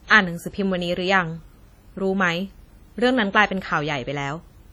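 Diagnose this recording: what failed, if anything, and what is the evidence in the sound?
The codec stage failed, with WMA compression the likely cause, audible for the whole speech clip. The audio has a ringing, washy character, and hiss swells and recedes with the speech, smearing each onset over tens of milliseconds. The damage is heavy and fits an early WMA encoder at a low bitrate near 32 kbps, where long transform blocks spread quantisation noise and weak spectral lines are zeroed. A spectrogram would show blurred onsets, patchy holes in the harmonics, and content reaching about 20.1 kHz.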